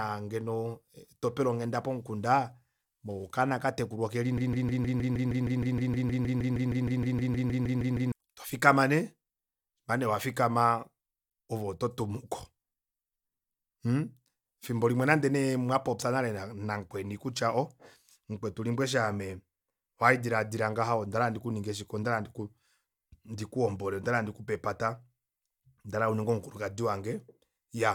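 From 4.38 s to 8.12 s the speech is caught in a broken-record loop: a single fragment of about 156 ms repeats back to back 24 times, giving a rapid, mechanical stutter at roughly six repetitions per second. The likely cause is a stall in the player, encoder or stream, which kept re-sending the last buffered piece instead of new audio. Whatever should have been heard during those 3.7 seconds is missing.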